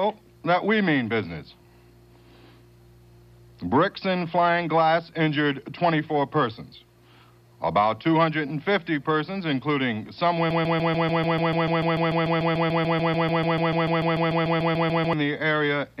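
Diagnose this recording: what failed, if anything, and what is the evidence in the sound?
A broken-record loop runs from 10.51 s to 15.13 s: a 146 ms fragment repeats exactly, back to back, 32 times, and the audio due in that span is lost. The likely cause is a stalled playback or streaming buffer re-sending its last block.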